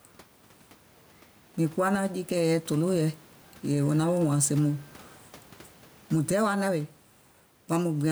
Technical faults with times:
0.00-8.12 gain pumping

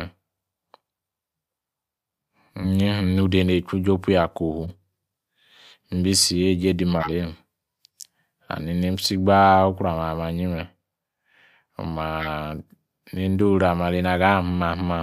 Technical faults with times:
4.63-4.71 corrupt frame decoded
6.94-7.11 compressed frames skipped
12.20-12.29 corrupt frame decoded

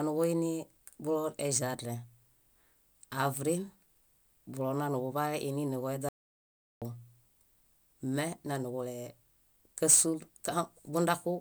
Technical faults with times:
6.09-6.82 audio dropout to silence

